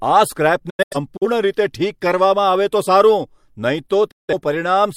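A speech recording hit by digital broadcast dropout: the receiver lost frames and muted, so the sound fades out within 8 ms into short holes, scattered between 0.70 and 1.26 s and again at 4.11 to 4.34 s.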